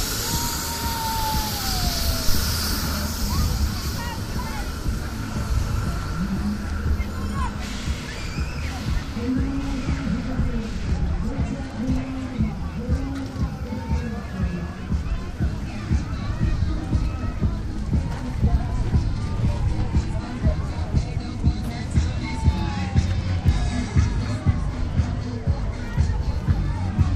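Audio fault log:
2.29 to 2.47 s, phantom power thump: a deep, low thud punches in, peaking at about -8 dBFS, then dies away quickly with a decay time of around 42 ms, so the whole event is gone in under a fifth of a second. That's the classic sign of a supply being switched on or off while the input was live. The sudden voltage step pushes through the coupling capacitors and comes out as a single low-frequency pulse over the sound.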